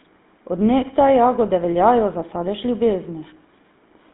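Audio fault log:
Throughout: GSM full-rate codec. The speech sits in a 150 Hz to 3.7 kHz band with nothing above 3.8 kHz. It carries a plainly audible buzzy, gravelly roughness from a vocal-tract model driven by sparse pulses, which fits a 13 kbps GSM full-rate stream.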